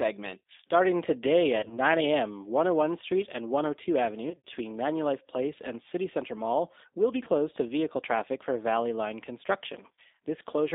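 G.729 codec, throughout: the 8 kbit/s coder rebuilds speech from a vocal tract model and sparse pulses within a 300 Hz to 3.7 kHz band, sounding narrow, rough and plainly synthetic.

VoIP packet loss concealed by the speech codec, at 1.59 to 1.79 s, 4.30 to 4.47 s, 7.23 to 7.29 s and 9.95 to 10.00 s: the decoder stretches its last pitch and filter into a fading buzz or coloured noise. The worst gap is at 4.3 s, with about 110 ms missing.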